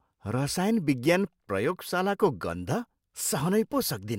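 No technical faults can be heard anywhere in this speech recording.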